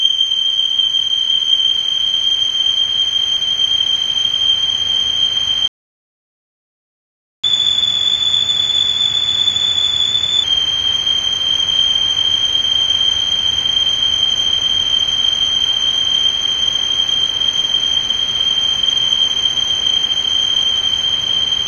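At 5.68 s the sound cuts out abruptly in mid-flow and the output stays completely silent until 7.44 s, a gap of about 1.76 s, before resuming from the point where it stopped. This is a playback stall: the player most likely ran short of buffered data or had its audio thread held up, so it had nothing to send to the output until it recovered.

From 7.44 s to 10.44 s the resumed sound runs noticeably fast and sits higher in pitch, by roughly one and a half semitones, then settles back to its normal rate and pitch. This is catch-up at higher speed: to make up the time lost in the stall, the player resamples its backlog to play at 1.1 times normal speed, which raises the pitch along with the tempo for those three seconds.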